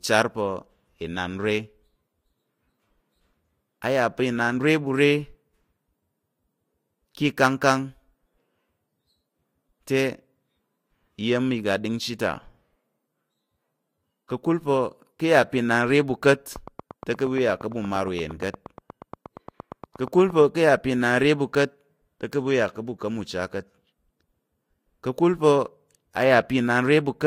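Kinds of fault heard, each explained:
Train of clicks: likely interference injecting pulses at a steady 8.6 per second, heard as around thirty ticks from 16.56 to 20.42 s, peaking above the speech.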